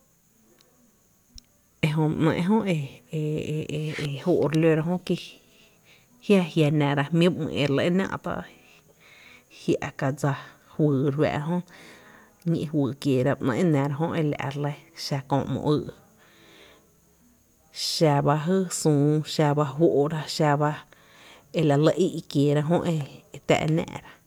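Nothing in this speech recording stands out as a technical fault at any point, so there's nothing to flag here.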